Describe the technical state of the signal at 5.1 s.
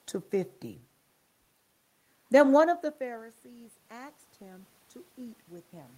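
At 5.1 s you're in the middle of an automatic gain rising stretch that starts at 2.48 s and runs to the end of the clip. Around two and a half seconds the talker moves back and the level at the mic falls by about 23 dB. The AGC reads that as too quiet and slowly winds its gain up, so the voice and the room noise swell together instead of the voice simply coming back.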